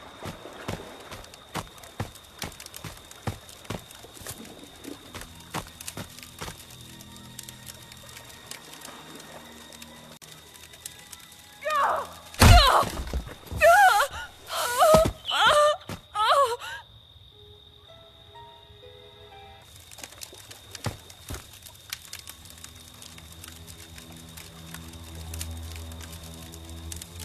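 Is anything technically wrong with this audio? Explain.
Yes. At 10.17 s the sound drops out for about 48 ms, to 10.22 s, a gap at a join of encoded pieces. The audio was encoded in separate sections and spliced without trimming, so the encoder's start-up delay and final-frame padding remain as inserted silence. It is heard as a brief hole in continuous sound that then resumes exactly where it stopped. A waveform shows a flat stretch with smeared edges, and a spectrogram shows a thin vertical blank band.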